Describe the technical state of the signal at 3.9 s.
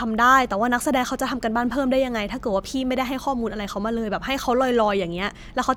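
At 3.9 s the speech signal is intact, with no audible technical fault at that moment.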